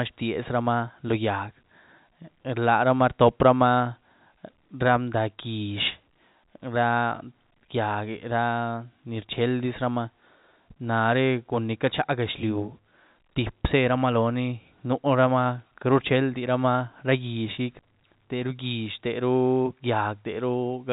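Nothing in the recording stands out as a technical problem. The speech carries the narrow sound of G.711 telephone coding, with nothing heard above about 3.8 kHz.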